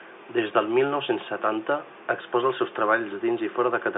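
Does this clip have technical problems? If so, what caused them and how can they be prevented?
No, the speech arrives as ordinary G.711 telephone audio, confined to a line band of roughly 250 Hz to 3.6 kHz with nothing above 3.8 kHz, and no technical problems can be heard in the signal.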